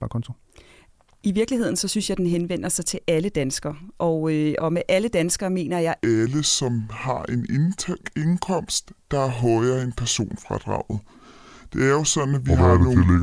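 Wrong sample rate from 6.04 s to the end: the speech slows to about 0.69 times its speed and drops roughly 6.5 semitones, sounding low and dragging. Both shift together, which fits 32 kHz material played back unconverted at 22 kHz.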